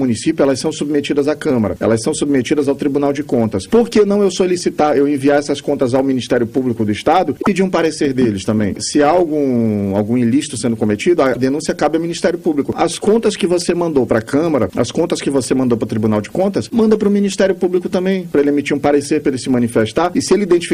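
At 7.41 to 7.47 s and 11.33 to 11.37 s the audio jumps ahead, followed by a brief glitch over a few 26 ms frames. The likely cause is a broken MP3 bit reservoir: after dropped frames, the decoder reads borrowed data from the wrong frame.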